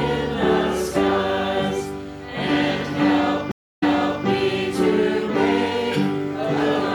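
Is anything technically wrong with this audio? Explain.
Yes. A stream reconnect occurs from 3.52 to 4.26 s. The connection dropped and the player restarted its decoder mid-stream. About 0.3 s of silence follows. The audio then resumes 0.44 s earlier than where it cut, so a short stretch repeats.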